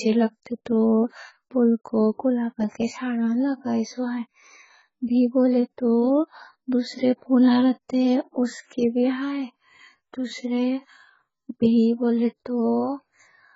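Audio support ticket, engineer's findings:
AAC compression, throughout the speech. Dull, band-limited sound with nothing above 7.6 kHz, heavy smearing and a fizzy, warbling texture on sibilants and held vowels. Likely an AAC-LC encode at a very low rate, consistent with about 12 kbps. The encoder lowered its cut-off and starved bands of bits, quantising coarsely and leaving gaps or substitute noise where detail was.

Pre-echo at 7.89 s, between "دوسرے پھولاں" and "اس کے بھی". Short hiss about 10 ms ahead of an attack, which sounds softened. Same transform codec. Quantisation noise spread evenly across the block, so noise sized for the loud onset leaked into the quiet moment before it.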